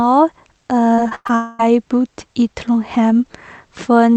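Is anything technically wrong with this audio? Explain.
Yes. From 0.95 to 1.31 s there is repeated packet loss (robotic sound): five short gaps, the longest about 0.1 s, are each patched by extending the preceding sound, leaving half the stretch concealed, so the speech turns choppy rather than dropping out once.

From 1.35 to 1.61 s a continuous smeared buzz replaces about 0.24 s of speech. This is likely a long network dropout, with one unbroken concealment that never reaches silence, unlike the separate short patches just before it.

The call path's Opus coding, which stops the audio above 8 kHz, is heard throughout.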